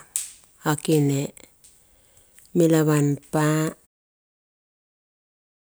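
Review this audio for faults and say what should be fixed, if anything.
Nothing needs fixing, since the review finds no faults in this speech clip, and the fade-out near the end is smooth and deliberate.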